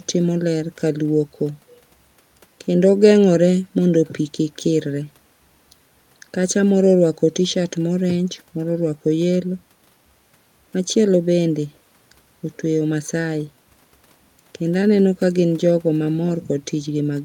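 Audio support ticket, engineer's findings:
Listened through the speech recording and nothing stood out; no findings to log.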